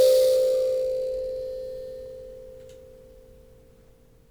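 A short piece of music with no audible technical faults at any point in the clip.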